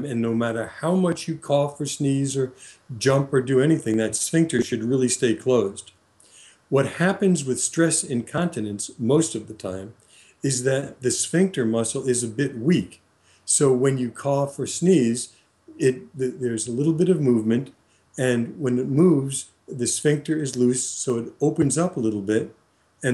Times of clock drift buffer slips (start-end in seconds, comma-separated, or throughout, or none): 0.50-21.10